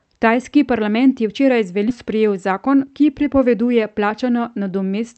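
It's a speech recording over a call link, with the top end rolled off around 8 kHz the way a wideband call codec does it. Around 1.89 to 1.97 s there's a skip ahead. Playback lurches forward with almost no gap, and roughly 0.7 s of speech is just gone. That's audio dropped either on the way or by the jitter buffer when it overflowed, with the two sides stitched together. Then from 2.52 to 2.86 s you get a jitter buffer speed-up. The speech runs about 9% fast at unchanged pitch because the receiver kept snipping out tiny pitch-period chunks, around 40 ms total, to drain extra buffered delay.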